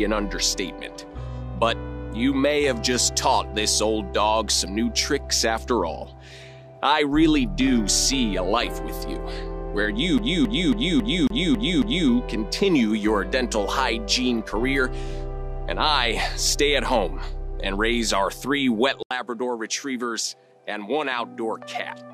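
From 10.18 s to 12.10 s the playback behaves like a CD stuck on one turn: a scratch keeps throwing the laser back a track at the same point of each rotation, so the pickup rereads one short stretch instead of moving on. The same 0.27 s slice of audio plays seven times in a row, each repeat cut off by a brief mute at the jump, giving the quick, evenly spaced stutter of a skipping disc.

At 19.03 s the recording's input was likely switched to a poorer device, with the system handing capture over to a different microphone or headset path partway through. There is a gap of about 80 ms at the changeover, and from then to the end the sound is narrower and duller, with nothing above 12.6 kHz. The level drops by around 5 dB, and a new background noise floor appears, roughly 45 dB below the signal.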